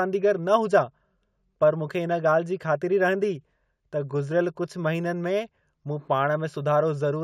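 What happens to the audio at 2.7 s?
At 2.7 s, as across the whole clip, imaging from linear upsampling dulls the top and adds faint shimmer on sibilants, from mirror images at 8 to 16 kHz roughly 40 dB down, which fits straight-line interpolation from 16 kHz to 48 kHz.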